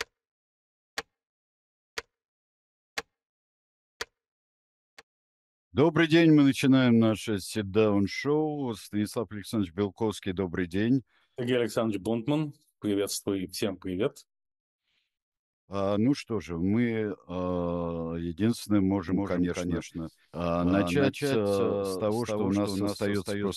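From 19.09 s to the end, a doubled audio track appears: a full-band copy trails about a third of a second behind, roughly 5 dB quieter, likely from a second, slower capture path. It sounds like a dry slapback echo, and a spectrogram shows every onset repeated at that fixed offset.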